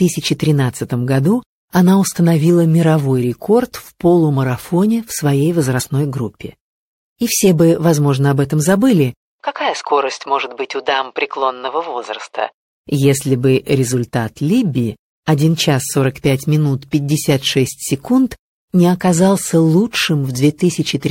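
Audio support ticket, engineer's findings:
Short glitch at 5.79–5.87 s, about 80 ms. Damaged data in the compressed stream: decoder misreads corrupt frames, loses sync, resyncs at next frame header. Waveform: abrupt discontinuity across that span.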